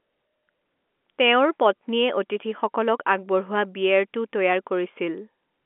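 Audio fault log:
Nothing stood out on listening; the speech sits within the narrow telephone band expected of G.711 telephone coding, with nothing heard above about 3.7 kHz.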